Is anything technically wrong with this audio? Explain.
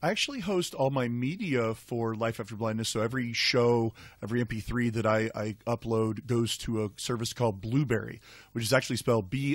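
Yes. Video or display buzz runs through the whole speech clip. A screen or video cable is leaking into the audio path: a buzz at the 50 Hz field rate with gritty hash above it, plus a thin whine at 15.6 kHz from the line scan, which fits a 50 Hz picture standard. It sits roughly 35 dB below the speech. Plain mains hum at 50 Hz would be a smoother tone with no high line whine and none of that rasp.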